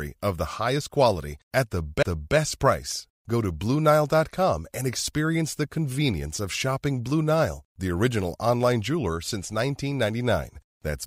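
Speech clip with a CD skip at 2.03 s: a tick and a brief mute of a few milliseconds, then the audio resumes from another turn of the disc's spiral.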